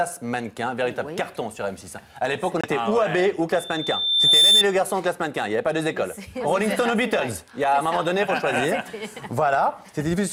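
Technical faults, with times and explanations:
2.61–2.66 s, Bluetooth stall: The sound drops to silence for 25 ms and then resumes. The likely cause is a wireless link where delayed packets emptied the playback buffer.
3.56–4.64 s, loudspeaker feedback squeal: A 3.6 kHz tone swells over about 0.7 s to around 10 dB above the sound. The microphone is re-amplifying its own loudspeaker at that frequency.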